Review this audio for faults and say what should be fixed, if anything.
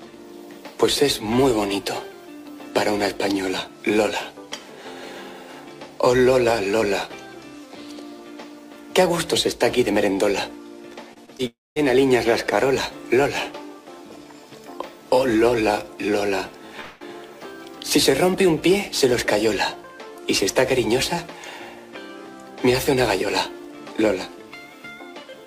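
Around 11.1 to 11.4 s there's a quick run of short concealed packet loss: three brief smears at 11.13, 11.26 and 11.37 s. Each one is about 20 ms of audio that arrived too late for the decoder, so the receiver stretched out the last bit of sound to cover the gap and then blended back into the real signal. The patches are short, between 15 and 23 ms. A larger jitter buffer, or forward error correction on the stream, would prevent this.

Right after that, from 11.47 to 11.78 s, the sound carries on as a fading continuation for a moment, then goes silent for about 0.22 s before picking up again further along, with roughly 0.3 s of audio gone. That's most likely a long network dropout. A second one runs from 16.80 to 17.02 s, where about 0.2 s is lost and the gap is covered entirely by fading continued sound with no silence. A more stable network path or redundant packet transmission would prevent this.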